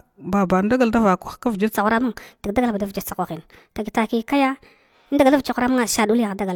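Speech clip with a section at the wrong speed from 1.73 s to the end at 6.55 s, running 1.28 times too fast, likely from playback on a mismatched clock. Pitch rises about four semitones along with the tempo, unlike pitch shifting or time-stretching, which separate the two.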